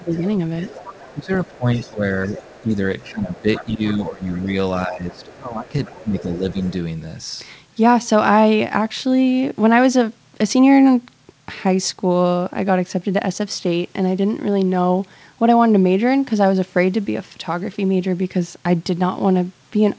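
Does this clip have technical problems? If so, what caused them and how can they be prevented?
Yes. From 0.0 to 0.24 s and again from 0.85 to 6.63 s the speech is suppressed in double talk. The talker's level sinks by up to about 20 dB in the first stretch and about 15 dB in the second, for roughly three seconds in total. The likely cause is an echo canceller that could not separate the near talker from the far-end echo and attenuated both. On a waveform the envelope caves in. On a spectrogram the harmonics fade or vanish in patches. Prevention: use a double-talk detector that holds the suppressor back when the near talker is active.

The other side's voice leaks through from 0.14 to 4.24 s at about 20 dB below the speech, and from 5.12 to 6.71 s at about 25 dB below. It sounds faint. This is likely loudspeaker playback reaching the microphone that the echo canceller did not fully remove. 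On a spectrogram a second, weaker set of harmonics runs underneath the main one, all below the 8 kHz ceiling of the G.722 call path. Prevention: use a headset, or give the echo canceller a clean reference signal and enough time to adapt.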